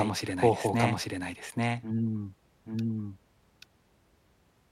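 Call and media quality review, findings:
Doubled audio track throughout the speech: second full-band copy trails by roughly 0.7 s at about equal level, dry, no decay or room colour. Likely cause: a slower capture path re-recording the signal, or an edit holding two copies out of step.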